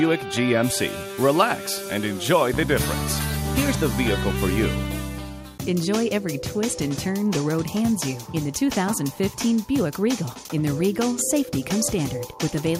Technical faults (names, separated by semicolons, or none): none